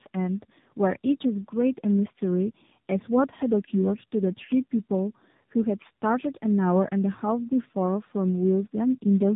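Throughout, the speech is rough, muffled and warbly, with nothing above 3.8 kHz. This is tandem speech coding, which fits two AMR-NB passes, each re-coding the previous one's degraded output.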